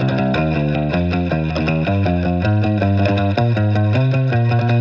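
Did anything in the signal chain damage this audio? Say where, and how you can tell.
No, nothing stood out on listening that would point to damage anywhere in the signal chain.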